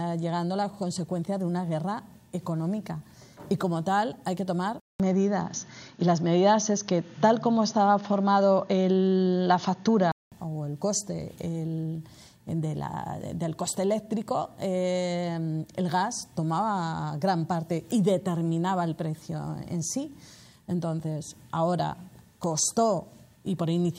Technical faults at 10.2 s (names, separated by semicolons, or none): input switched to a poorer device